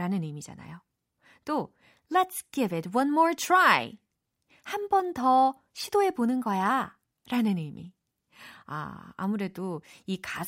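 Speech clip with nothing technically wrong in it.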